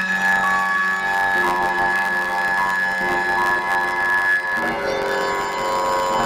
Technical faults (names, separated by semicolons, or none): planar audio read as interleaved